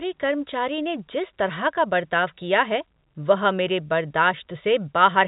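No faults heard in the speech; the band stops at 4 kHz with only a faint level-following noise floor, as expected of G.711 A-law telephone coding at 64 kbit/s.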